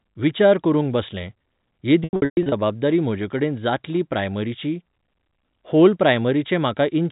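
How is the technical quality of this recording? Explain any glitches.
The recording has one clear glitch, packet loss with pitch repetition, from 2.04 to 2.52 s, ending just before "म्हजेकडेन जातली प्रायमरीची". About 330 ms of audio dropped out in bursts across 480 ms, the longest lasting 120 ms. The receiver bridged each gap by repeating the last pitch period, so the sound turns briefly buzzy and held, and the longest gap fades toward silence. On a spectrogram, frozen repeated harmonic bands alternate with faded patches, and the waveform shows identical periodic cycles that decay in amplitude. The audio sits within the telephone band of G.711 coding, with nothing above 4 kHz.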